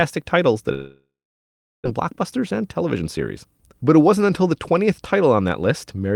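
A long network dropout runs from 0.73 to 1.88 s, just after "titles that". The speech gives way to a brief fading buzz and then about 0.76 s of silence, most likely because packets stopped arriving. When the sound resumes, roughly a second of speech is simply gone.

A jitter buffer speed-up follows from 1.97 to 3.73 s. With audio piled up after the gap, the receiver trims short pitch-period slices to shed around 150 ms of delay. The speech plays about 8% faster at unchanged pitch and sounds hurried.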